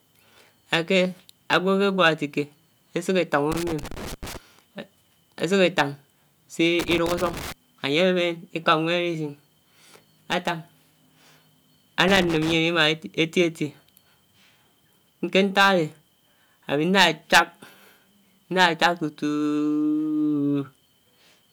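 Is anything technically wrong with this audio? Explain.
Yes. A loose connector crackle breaks in three times, from 3.52 to 4.37 s, 6.79 to 7.52 s, and 12.08 to 12.63 s. A worn or dirty contact in the signal path keeps losing and regaining contact. That chops the speech, heard as irregular bursts of scratchy crackle.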